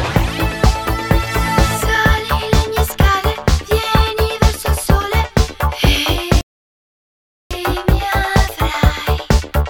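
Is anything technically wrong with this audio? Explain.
Yes. There is a playback stall from 6.41 s to 7.51 s, where the output drops to silence for about 1.1 s in the middle of the sound before audio returns. The likely cause is the player running short of data or having its output thread blocked, so nothing was delivered to the device until it recovered. The effect is an abrupt cut to silence, a clear gap of just over a second, and then playback carrying on.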